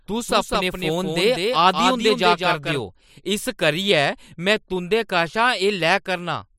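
Speech opens with a doubled audio track already under way, running to 2.8 s: a second full-band copy trails by roughly a fifth of a second, a few dB quieter, then stops abruptly. It likely comes from a second, slower capture path. Unlike room echo, it has no decay and no reverberant colour.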